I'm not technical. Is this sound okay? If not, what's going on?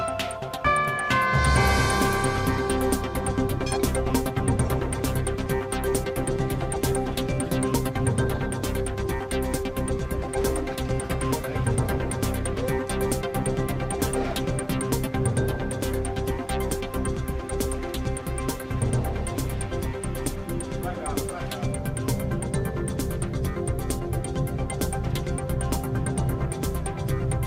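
No. At 4.1 s there is a skip ahead: a chunk of the sound was thrown away in transit, or because the receiving end's holding area for incoming audio was overfull while later audio was already waiting. Playback jumps straight forward with almost no gap, so roughly seven tenths of a second of sound is simply gone, and the moments before and after the jump are stitched together directly.

From 5.88 to 7.93 s, and again from 9.28 to 20.01 s, there is a jitter buffer speed-up. The receiver had built up more waiting audio than it wants, so it trimmed many tiny slivers out of the sound to catch up. Playback runs about 2% fast without changing pitch, losing a few hundredths of a second in the first stretch and about a fifth of a second in the second.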